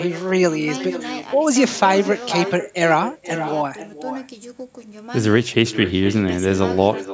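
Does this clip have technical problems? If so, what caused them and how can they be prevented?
Yes. Echo with no canceller runs through the whole clip. Every phrase returns about half a second later as a quieter and thinner copy, roughly 12 dB below the speech. The far end is playing the call on a loudspeaker. Its microphone picks that sound up and sends it back across the network. Nothing removes it. The call's microphone processing is audible as the missing content above 8 kHz and the missing lowest bass. To prevent the echo, enable acoustic echo cancellation at the far end or use a headset there.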